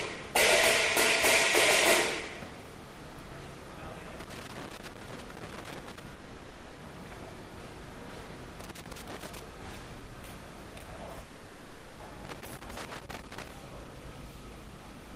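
Loose connector crackle, 4.20 to 6.00 s: an irregular burst of scratchy crackle as a worn or dirty contact rapidly makes and breaks, chopping the signal.

Long network dropout, 6.15 to 6.79 s: the sound gives way to a fading buzzy continuation of what came just before, lasting about 0.62 s, then resumes further on with that stretch missing. The likely cause is audio failing to arrive, with the receiver filling the gap.

Loose connector crackle again, 8.60 to 9.39 s: the same intermittent contact produces a shorter crackling burst.

Long network dropout, 11.21 to 12.01 s: a longer fill of about 0.78 s decays in the same way before the sound picks up later, that portion lost.

Loose connector crackle, 12.25 to 13.51 s: a final stretch of ragged crackle from the make-and-break contact.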